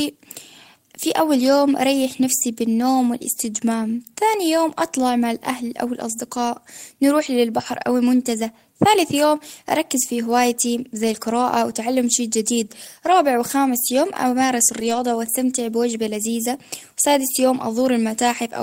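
At 13.11 s, between "القراءة وتعلم شيء جديد" and "وخامس يوم أمارس", and again from 14.79 to 15.01 s, after "وخامس يوم أمارس", the speech turns briefly rough and noisy without any gap. These are lost packets rebuilt from error correction: the decoder played low-bitrate copies carried in the following packets. The 120 ms stretch fits roughly six separate lost packets.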